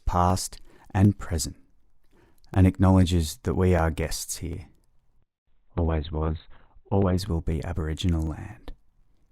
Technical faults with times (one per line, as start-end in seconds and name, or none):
0.05-9.02 periodic USB or driver dropouts
5.18-7.18 adaptive stream at a lower bitrate